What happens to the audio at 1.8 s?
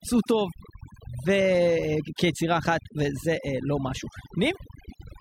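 At 1.8 s the speech carries overdone noise removal, present across the whole clip rather than starting there. A denoiser set too aggressively pulls individual frequency bands down whenever they sit close to its noise estimate, taking quieter parts of the voice along. The background in the gaps drops and breaks up into twinkling specks. Unlike a noise gate, which mutes everything at once, this strips separate bands independently.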